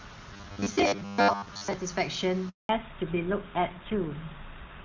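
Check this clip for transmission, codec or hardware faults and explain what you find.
Three faults are audible: a robotic stretch near the start, a short dropout, and a loss of bandwidth that lasts to the end.

Robotic sound from repeated short buffers, 0.33 to 1.73 s: the speech becomes a rigid metallic buzz at 100 Hz. The likely cause is a 10 ms block being replayed when fresh audio arrives late, with most of the real audio in this stretch skipped. Unlike codec roughness, the pitch stays fixed instead of following the talker.

Handover gap, 2.49 to 2.69 s: the speech fades quickly and then goes fully silent for 200 ms while the call switches networks and no frames arrive. What sets it apart from a packet-loss glitch is what happens next. The speech returns with a different, narrower sound rather than picking up where it left off.

Fallback to narrowband, 2.69 s to the end: nothing above 4 kHz remains, so the speech turns duller and rougher. 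Before the gap, the HD Voice wideband codec carried clean high frequencies. The change points to a switch from AMR-WB at 23.85 kbit/s to GSM full rate. Because it persists to the end instead of flickering, it is a codec change rather than momentary filtering.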